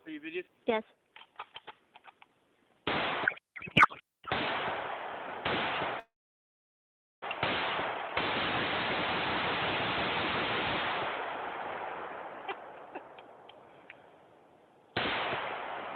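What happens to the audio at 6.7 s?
At 6.7 s the audio sits in silence: from 5.99 s it briefly continues its last sound as a buzz or hiss, fades to nothing for about 1.1 s, then resumes at 7.24 s with nothing lost. This is a call audio freeze, likely from delayed packets draining the jitter buffer, adding about 1.2 s of delay.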